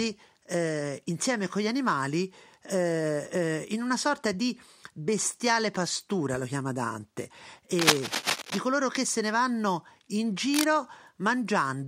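Speech with cable scratch noise: rustling bursts at 7.78 to 8.58 s, about as loud as the speech, and briefly at 10.54 to 10.69 s, somewhat quieter. They show as ragged broadband smears and spiky waveform clusters, likely from a worn, moving connector.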